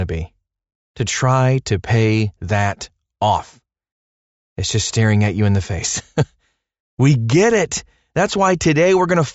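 No technical faults can be heard anywhere in the speech recording; the signal stays steady and intact throughout.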